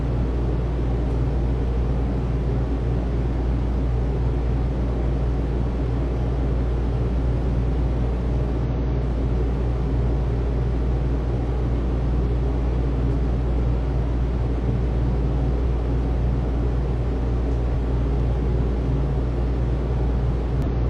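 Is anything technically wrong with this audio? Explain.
Yes. Damaged data in a compressed stream causes brief glitches at 8.64–8.68, 15.61–15.66, 17.70–17.75, 20.62–20.67 and 20.90 s. Corrupt bytes make the decoder misread frames and resync, so each burst is heard as a chirp, squawk, click or short hole.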